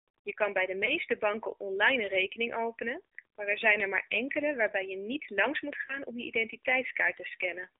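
Speech heard through the AMR narrowband mobile codec, band-limited to 300 Hz–3.7 kHz with a buzzy, synthetic quality that fits a low mode around 7.4 kbps; a spectrogram shows an empty region above 3.7 kHz. Lost AMR speech frames, each a single 20 ms frame, cause brief warbling dips at 0.86–0.92 s and 5.86–5.97 s as the decoder repeats the last good settings at falling gain, visible as short smeared, fading patches in the waveform.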